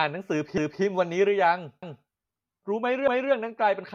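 A quarter-second stutter recurs at 0.58, 1.83 and 3.08 s, each time replaying 250 ms of speech. These are overlapping chunks: the audio passed through in 1-second blocks, and each block began 250 ms before the previous one finished, doubling that stretch at every join.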